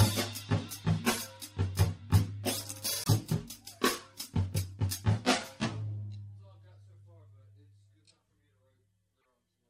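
Frames were likely dropped from the MP3 stream, breaking the bit reservoir, so the following frames read borrowed data from the wrong bytes. The music skips ahead with a brief chirp, burst of noise or short gap at 3.04 to 3.09 s and again at 9.21 to 9.25 s, lengths that fit roughly two 24 ms frames.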